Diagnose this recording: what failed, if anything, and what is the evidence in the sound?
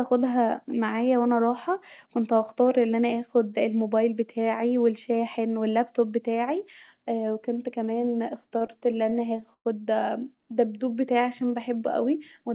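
At the network and jitter buffer stage, late packets repeatedly emptied the buffer, causing repeated stalls (stutter). Between 8.44 and 9.67 s the speech keeps catching, with ten concealed gaps up to 114 ms, but nothing is lost.

A jitter buffer slow-down, where the receiver stretched pitch periods to rebuild its reserve, adds 155 ms between 10.54 and 11.93 s. The speech runs at 90% speed with unchanged pitch.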